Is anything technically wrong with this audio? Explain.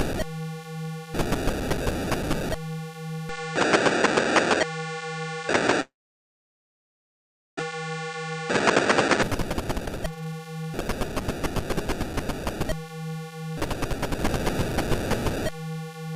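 Yes, there are three problems.

From 3.29 s to 9.23 s the input switched to a poorer device, likely another microphone or a headset profile. Nothing above 8.8 kHz remains, so the sound turns duller. A new noise floor about 35 dB below the signal appears, with no gap and little level change at the switch.

From 5.81 s to 7.74 s there is likely a long network dropout. The receiver stretched the last sound into a fading buzz, then left about 1.7 s of near-silence. About a second of audio never played, and the delay shifted by roughly 0.7 s.

From 9.37 s to 11.76 s a jitter buffer speed-up cuts back the excess delay. The receiver removes short pitch-period slices repeatedly, about 0.7 s in total, so the sound runs at roughly 129% speed with unchanged pitch and comes across as hurried.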